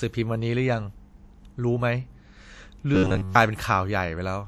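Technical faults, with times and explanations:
2.95 to 3.35 s, robotic sound from repeated short buffers: the speech turns into a rigid, metallic buzz at 93.8 Hz. Likely the audio arrived too seldom, so a roughly 11 ms chunk got looped for most of that stretch while the real audio was skipped.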